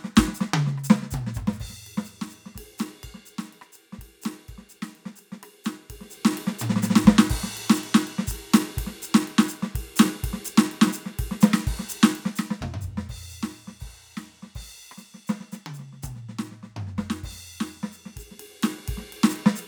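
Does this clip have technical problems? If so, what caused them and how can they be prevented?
No, nothing technical in this music needs fixing.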